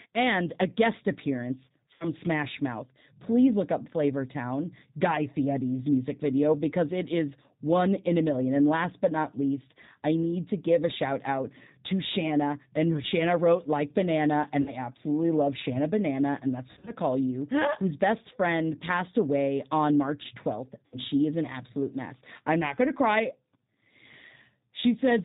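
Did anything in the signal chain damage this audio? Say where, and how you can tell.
Yes. The G.729 codec damages the whole recording at the codec stage. Everything above 4 kHz is gone, and the speech has a plainly rough, synthetic edge. That fits an 8 kbit/s coder that rebuilds each 10 ms frame from a filter, a pitch predictor and a few pulses.

VoIP packet loss concealed by the speech codec appears on the network at 1.94 s, 14.62 s, 16.71 s and 20.86 s. The first comes after "and a guest appearance". The second precedes "absolutely love". The third sits between "and that's" and "call you", with 120 ms of gaps spread over 160 ms. At each point the decoder stretches its last pitch and filter into a fading buzzy tone or coloured noise, and the voice stays weak briefly afterwards. The other gaps last 40 to 60 ms, which fits two or three lost packets each, while the third loses six packets.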